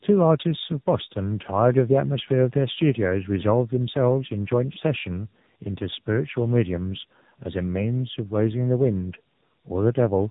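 Speech throughout shows tandem speech coding: two narrowband speech coders in a row, with nothing above 3.8 kHz, rougher and more warbly than any single pass would leave it.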